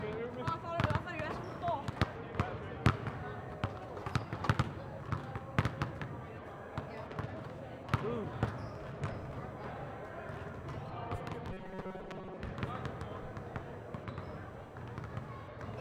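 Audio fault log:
throughout, computer activity noise: a pulsing buzz repeating at around 1 kHz sits somewhere near 35 dB below the sound. Processor, graphics or mouse load is shifting the audio circuit's shared ground, so the buzz tracks what the computer is doing, not what the audio is doing.
11.52 to 12.37 s, robotic sound from repeated short buffers: the audio turns into a rigid, metallic 188 Hz buzz. Roughly 70 percent of the span is replayed fragments rather than real audio. The likely cause is late-arriving audio being covered by looping the last chunk, about 5.3 ms each, and that repeat rate imposes the buzz.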